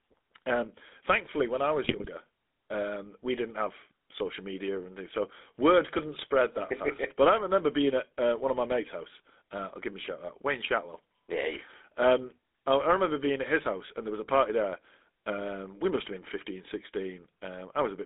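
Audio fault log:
Throughout: GSM full-rate codec. The speech is plainly buzzy and gravelly, squeezed into a band of about 200 Hz to 3.7 kHz, which fits a 13 kbps GSM full-rate coder. Modelling the vocal tract and exciting it with sparse, regularly spaced pulses leaves the harmonics rough and smeared. On a spectrogram, energy stops sharply near 3.7 kHz with an empty band above.
1.84–2.06 s: GSM bit errors, just after "um thankfully when I". For about 0.22 s the speech breaks into squawks and gargling as corrupted filter, pitch and gain values reach the decoder frame by frame. The waveform shows erratic level jumps, and the spectrogram shows distorted, misplaced formant bands.
10.02–10.08 s: GSM bit errors, right after "I'll give him a". A brief pop and squawk lasting about 54 ms, where damaged gain and spectral parameters throw a few frames off. It shows as a short spike in the waveform and a smeared vertical blotch on the spectrogram.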